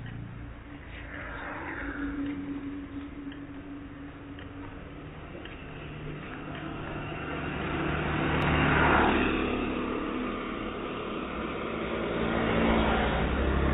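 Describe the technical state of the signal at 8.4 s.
A dropped buffer (overrun) at 8.42 s sounds as a jump where the sound skips forward, with no gap of silence before it continues. The likely cause is that the program fell behind and the hardware overwrote its samples before they were collected, so a few milliseconds of audio vanished and the two sides were butted together. The jump sits inside the call path's narrow band, with nothing above 4 kHz.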